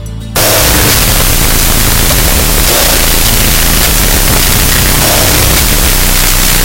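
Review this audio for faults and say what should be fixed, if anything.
From 0.36 s right through to the end at about 6.6 s, there's a wrong sample width fault. The audio turns into loud, harsh noise with the real signal buried underneath, and everything plays at half speed, so it's an octave low. That fits 16-bit data being read as unsigned 8-bit. Each original sample gets split into two separate values, and only the high bytes still carry anything like the true waveform. To prevent it, make sure the reader takes its sample format from the file header or stream description and doesn't assume a default width.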